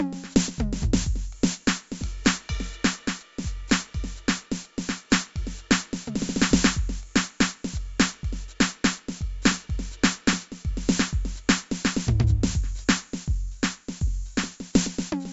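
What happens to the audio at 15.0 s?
4-bit ADPCM compression is present at 15.0 s, as it is throughout the music, not a fault starting there. Each sample is coded as a small 4-bit step from a running prediction, with a step size that adapts as it goes. The damage is heavy: a gritty hiss rides on louder passages, and sharp attacks smear as the step lags behind. Nothing reaches above 7.7 kHz, which dulls the top and fits a rate of around 64 kbps.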